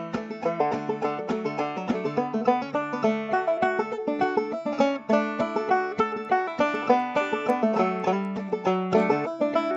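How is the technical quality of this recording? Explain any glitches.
From 6.0 s to the end, a resampler restarted on every block leaves edge errors at each 250 ms boundary, heard as ticks at a steady 4.0 Hz that sound only with signal. This fits a 16 kHz to 48 kHz conversion; the strict, signal-gated rhythm sets it apart from random dropouts.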